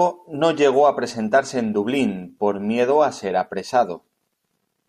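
No technical faults can be heard anywhere in the speech recording. There is nothing in it that calls for a time mark or a description.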